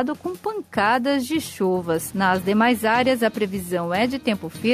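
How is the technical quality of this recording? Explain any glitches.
No glitches turn up anywhere in the recording; there is nothing in it to explain.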